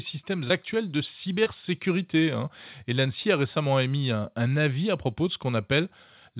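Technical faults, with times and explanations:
0.48–0.52 s and 1.44–1.48 s: short concealed packet loss. In each spot roughly 20 ms of audio failed to reach the decoder in time, and the receiver patched the gap by extending the preceding sound, carrying on its pitch where it was voiced or substituting shaped noise where it was not, before crossfading back into the real signal. That splice is heard as a brief smear or wobble, set against a band that stops at 4 kHz, consistent with a G.711 call path.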